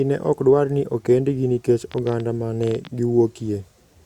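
From 1.92 to 2.88 s, just after "dwar ni okendgi nikech", a train of clicks ticks over the speech. About fifteen similar pulses arrive at roughly 12.6 per second, unevenly spaced. They peak about 5 dB above the speech. Interference from nearby equipment is the likely cause.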